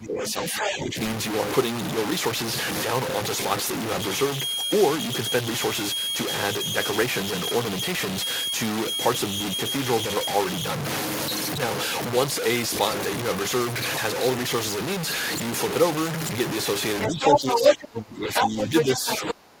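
Throughout the speech, low bit depth without dither gives a coarse, grainy distortion that rises and falls with the voice, with noise only a few decibels under the signal. This likely comes from truncation to about 4 bits. On a waveform, the trace moves in visible staircase steps. On a spectrogram, broadband hash tracks the speech energy instead of forming a steady floor.

From 0.0 to 0.97 s, speech is suppressed in double talk. The voice dips by around 15 dB over about two thirds of a second, likely because the echo canceller pulled down the near talker while both sides spoke. The waveform shows hollowed-out, ducked stretches.

From 0.60 to 0.72 s, the other side's voice leaks through, a short scrap a little below the speech. It is likely residual loudspeaker echo the canceller missed. On a spectrogram it appears as a second, fainter harmonic pattern overlapping the talker's.

From 3.92 to 10.79 s, a feedback whistle sits at 3.3 kHz, roughly 20 dB below the speech. 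It is a thin, steady tone that wavers slightly, likely from a loudspeaker-to-microphone loop hovering at the edge of howling. A spectrogram shows a single bright horizontal line.

At 17.01 to 17.76 s, the other side's voice leaks through again, clearly louder than the speech. From 17.09 s to the end, double-talk suppression returns for about two seconds, with drops of around 25 dB that leave deep gaps in the waveform. During that stretch, further leaked fragments at 18.34 to 18.48 s, somewhat louder than the speech, and at 18.76 to 19.33 s, at about the same level, show up as competing harmonic stacks.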